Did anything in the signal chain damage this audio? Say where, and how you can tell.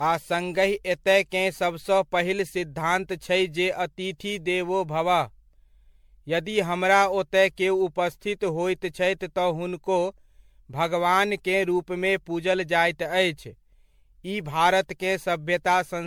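Yes, generation loss at the codec stage: swirly, hollow, smeared speech throughout, likely from about ten MP3 re-encodes, each requantising on a shifted frame grid.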